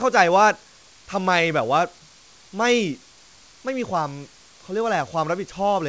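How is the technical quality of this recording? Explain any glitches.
Nothing stood out on listening to this speech recording; the room noise sits far below the speech, and the call path's upper limit of 8 kHz matches G.722.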